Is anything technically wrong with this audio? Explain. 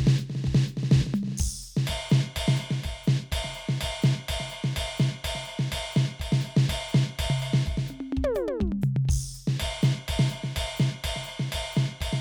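No, nothing technically wrong can be heard in this music clip. There are no audible faults anywhere in the recording.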